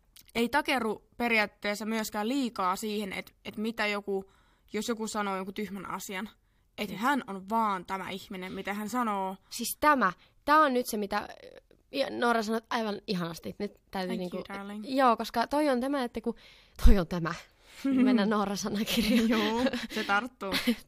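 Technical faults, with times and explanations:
Listening closely to this speech recording, nothing stood out as a technical problem at any point.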